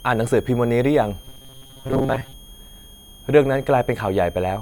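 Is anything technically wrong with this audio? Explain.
Yes, there are two problems. A switching supply whistle runs through the whole clip: a thin tone wandering between about 3.07 and 3.35 kHz, roughly 30 dB under the speech. A power supply cycling in audible burst mode shifts its pitch as the load moves.

From 1.25 to 2.33 s the speech turns into a rigid, metallic buzz at 134 Hz. This is robotic sound from repeated short buffers, likely caused by audio arriving too late and a chunk of about 7.5 ms being looped to fill most of that stretch. The loop's repeat rate sets that fixed pitch.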